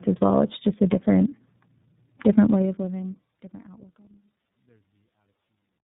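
Speech with tandem speech coding throughout: the sound points to two low-rate speech codecs in a row, likely AMR-NB then iLBC, the second re-encoding the first's already degraded output. The result is rough, muffled and warbly, with nothing above 3.8 kHz, beneath a smooth fade-out running from around two and a half seconds to the end.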